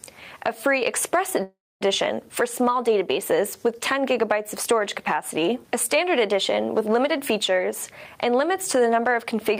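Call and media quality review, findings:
Call audio freeze, 1.43–1.83 s: last sound smeared into a fading tail, then 0.25 s silence; resumes intact, 0.38 s late. Likely jitter buffer underrun from delayed packets.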